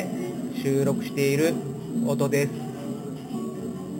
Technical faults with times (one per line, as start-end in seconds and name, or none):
0.00-4.00 imaging from sample-and-hold upsampling